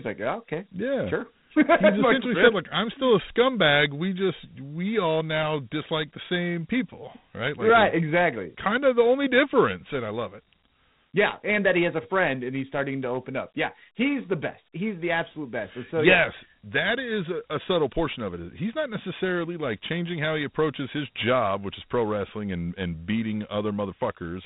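From start to end, the speech carries Dialogic VOX ADPCM damage: a gritty hiss that rides on the speech, with nothing above 3.9 kHz. The 32 kbps rate fits 4-bit samples at 8,000 per second. Unlike a clean telephone band-limit, the hiss tracks the speech level.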